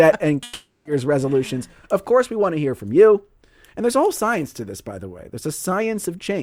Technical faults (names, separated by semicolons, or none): long network dropout